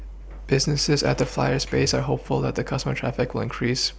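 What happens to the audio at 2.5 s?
Nothing goes wrong at 2.5 s: the speech runs through that moment intact, with no dropout, click or distortion.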